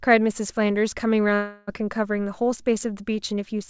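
From 1.34 s to 1.69 s the speech gives way to a smeared, buzzy continuation of the last sound, which gradually fades without ever dropping to true silence. This is most likely a long network dropout: for about 0.35 s no audio reached the receiver, which kept extending the preceding sound to cover the gap. Speech resumes at 1.69 s with that portion missing, while the band-limited sound of the call path, with nothing above 8 kHz, continues unchanged.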